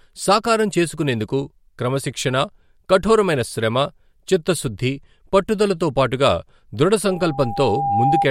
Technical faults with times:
7.07-8.26 loudspeaker feedback squeal

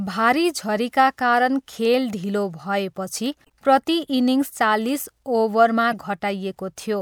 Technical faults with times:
3.42-3.50 damaged data in a compressed stream
5.92-5.94 damaged data in a compressed stream

